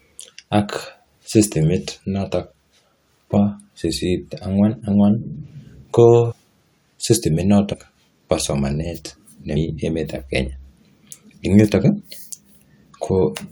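Compressed frames are skipped at 3.36, 6.31–6.33, 7.72–7.74, 9.56 and 11.99 s. Each jump drops a few 23.2 ms frames, about 70 to 150 ms of speech.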